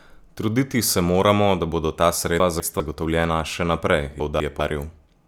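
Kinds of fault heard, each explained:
Chunks out of order: twice a 200 ms piece of speech lands one slot late, playing after the chunk meant to follow it. Nothing's lost, but after "moramo da bodo ta" at 2.4 s, and again at 4.2 s, you hear a jumbled moment.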